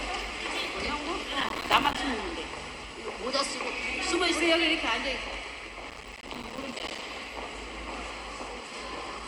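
Processor overload crackle hits from 1.41 to 1.97 s and again from 5.90 to 7.02 s. The processor keeps missing deadlines on buffers of around 5 ms, leaving tiny silent gaps that add up to a gritty tearing.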